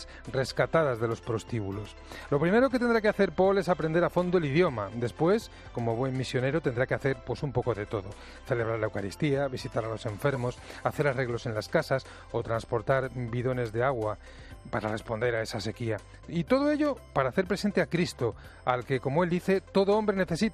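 At 10.35 s there is a brief chirp-like blip, a corrupt frame decoded: flipped bits in what sounds like a couple of compressed frames were played back anyway, so misread gains and codes put energy at wrong frequencies, peaking around -25 dBFS.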